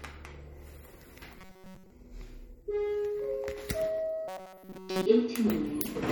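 Throughout the audio there is a watery, swirling texture, with smeared attacks, likely MP3 compression at a low bitrate near 48 kbps. Its damage drifts and flickers frame to frame, unlike the steady, pitched buzz that appears later.

From 1.38 to 1.90 s and again from 4.28 to 5.06 s, the sound turns into a rigid metallic buzz at 188 Hz. This is robotic sound from repeated short buffers: a chunk of roughly 5.3 ms is likely looped in place of all the incoming audio, imposing one fixed pitch rather than codec swirl.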